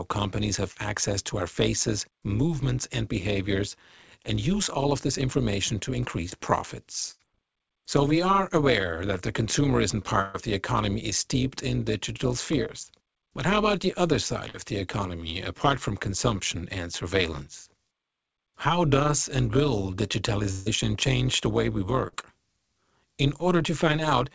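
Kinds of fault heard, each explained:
Overlap-add ripple: frames were rejoined with overlaps that don't sum evenly, so level swings about 11 dB roughly 150 times a second, a metallic buzz throughout.
Short concealed packet loss: 20 to 40 ms of audio missed the decoder, and the receiver extended the preceding sound, leaving brief smears or wobbles.
Burst of packet loss: runs of 40 to 140 ms were lost, filled by continuing and fading the last sound into buzz or hiss, then audio resumes with that stretch skipped.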